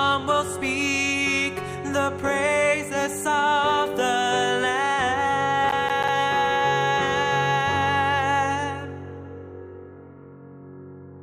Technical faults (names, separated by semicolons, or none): processor overload crackle